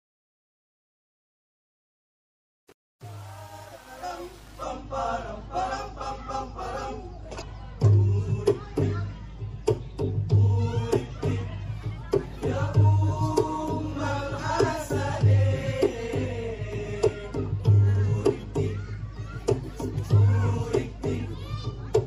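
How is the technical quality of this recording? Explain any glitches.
Technical quality is poor: the whole recording carries plainly audible compression damage, the opening fade turns gritty, and one short glitch interrupts the sound shortly after.

MP3 compression runs throughout, and lossy MP3 encoding is the likely cause of the damage. The encoder divides the signal into narrow frequency lines and spends its limited bits only where its hearing model expects them to count. With a budget that fits a 64 kbps encode, it cuts the treble off at a fixed point and drops weak lines, which flicker on and off between frames. The result sounds dull, watery and swirly, with metallic chirps on bright, hissy content and softened attacks.

Truncation distortion on a fade runs from 0.00 to 4.63 s, across the fade-in. The gain stage behind that fade kept only about 7 bits and added no dither. Near the bottom of the fade the waveform collapses into a handful of coarse square steps. 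The quiet early part therefore sounds gritty instead of rising cleanly.

Damaged data in a compressed stream appears from 7.38 to 7.42 s. Part of the encoded data at that point was corrupted, so the decoder misread or rejected those frames and lost its place. It then had to hunt for the next valid frame header before playback could continue. The listener hears a brief burst of about 40 ms, a chirp or blip that breaks the flow of the sound for that moment.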